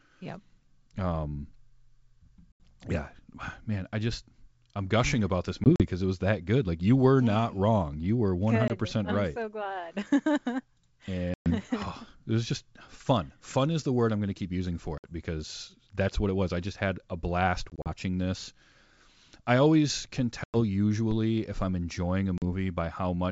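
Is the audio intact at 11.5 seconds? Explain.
No, 11.5 seconds falls inside a packet loss on an ADPCM call, running from about 11.34 to 11.51 s. Around 120 ms of audio drops to a hard-edged silent hole. The decoder's predictor and step size lose sync, so the sound comes back slightly distorted before settling.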